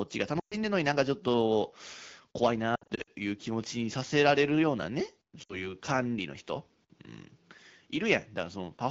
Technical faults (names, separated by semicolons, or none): lost AMR speech frames